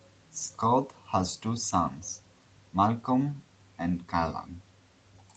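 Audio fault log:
The speech has passed through a call's microphone processing and a WebRTC call path using the Opus codec at 32 kbps, with audio content extending up to 8 kHz and nothing above, as expected for that bandwidth, and no faults are detected.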